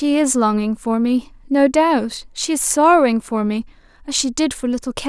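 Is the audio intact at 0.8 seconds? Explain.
Yes, at 0.8 s the speech is intact, with no dropout, click, distortion or other fault at that moment.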